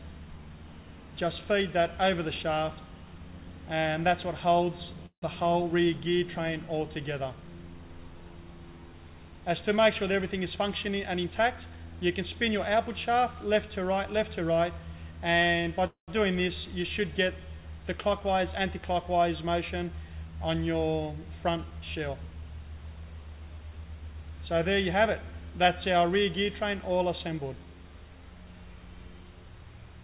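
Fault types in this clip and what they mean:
Call audio freeze: At 5.06 s and 15.87 s the sound stops advancing and the last fragment carries on as a brief, fading buzz before dropping to silence (about 90 ms and 110 ms of it) within gaps of 161 ms and 209 ms. The likely cause is delayed packets draining the jitter buffer. Nothing is lost: the sound resumes where it left off, only later. On a waveform this looks like a decaying tail into a flat stretch; on a spectrogram, smeared, static bands ending in a blank column.
Jitter buffer speed-up: Three stretches, 10.12 to 11.87 s, 18.12 to 18.80 s and 20.97 to 22.22 s, play hurried at 108%, 106% and 114% speed with unchanged pitch. The receiver shortens an overfull buffer by cutting out one or a few pitch periods at a time, removing roughly 150 ms, 50 ms and 200 ms in total. A waveform shows the periodic cycles packed closer, with tiny splice points. 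On a spectrogram, harmonic spacing stays the same while events arrive compressed in time, all below the 4 kHz ceiling of the G.711 call path.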